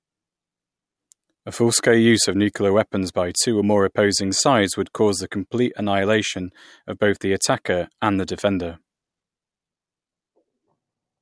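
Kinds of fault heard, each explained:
No technical faults can be heard in this speech recording. Nothing in the audio calls for a fault line under any heading.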